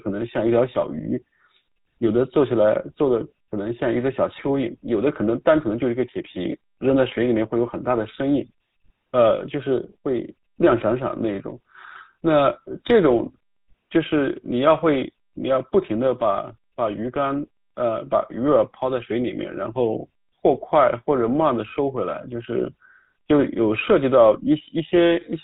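From start to finish the speech has passed through a GSM full-rate codec, at a bitrate consistent with 13 kbps. The codec rebuilds the voice from a vocal-tract model driven by sparse, regularly spaced pulses and discards everything above 4 kHz, leaving a muffled, buzzy, gravelly roughness that is plainly audible throughout.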